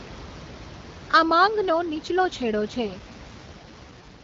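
An AMR rate drop runs from 2.93 s, right after "માંગનો નીચલો છેડો છે", to the end at 4.24 s. The speech turns rough and synthetic with no gap or band change, which fits the link forcing AMR-WB from 12.65 down to 6.6 kbit/s, trading voice bits for error protection. Room noise sits about 18 dB beneath the speech.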